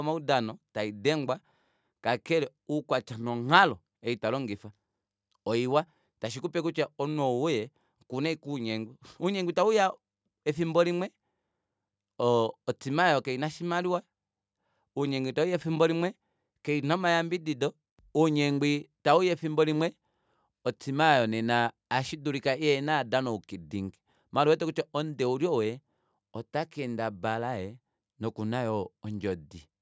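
A recording of speech with no technical faults to be heard anywhere in the signal.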